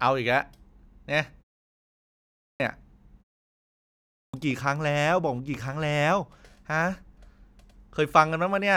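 Clipped start after a pause at 1.95 s and again at 3.71 s: after gaps of 0.6 s and 0.56 s, the output device has dropped into an idle state and must wake and resynchronise before it passes audio. About 650 ms is lost from 1.95 to 2.6 s, and about 620 ms from 3.71 to 4.34 s. Each time the speech cuts in abruptly from silence, already underway, its opening sounds missing.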